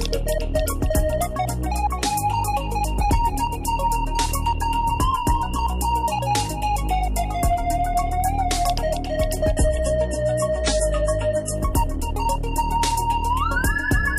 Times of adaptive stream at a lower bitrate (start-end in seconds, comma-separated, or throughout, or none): 9.57-11.57